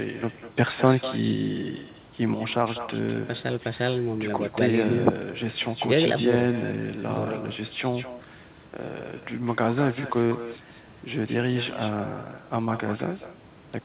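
From the start, the speech carries an echo with no canceller. Each phrase returns about a fifth of a second later. The copy sits about 13 dB below the direct sound. It is thinner than the original. The far end plays the call through a loudspeaker, and its microphone picks that up. Nothing removes it, so the talker hears themselves after the network round trip. What the talker says is shadowed by a faint repeat.

At 2.34 s the level drops abruptly by about 6 dB. It stays down until the end at 13.84 s. The likely cause is one channel dropping out. One stereo channel goes missing, and the mono sum loses half of what both channels shared. The speech sounds suddenly quieter. The echo continues beneath it. The audio has nothing above 4 kHz throughout, which fits a narrowband telephone codec.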